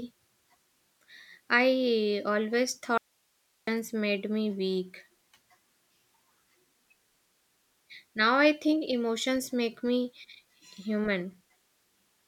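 The signal path likely lost its source for about 0.7 s while the downstream chain stayed live, causing an audio dropout to a faint residue in this speech clip. From 2.98 s to 3.67 s, between "I always" and "made me weak", the speech cuts out abruptly, leaving only hiss roughly 45 dB below the speech level.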